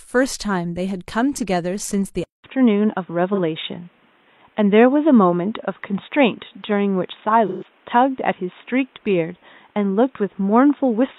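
An input switch to a poorer device is the likely cause of the change at 2.24 s. After a 200 ms silence, the speech loses everything above 3.8 kHz, shifts level by a few decibels, and gains faint new background noise.

AAC frame loss with concealment hits at 3.34 to 3.39 s and 7.47 to 7.64 s. The decoder patched the gaps from earlier spectrum, giving a brief smeared patch, then a longer phasey, fading one.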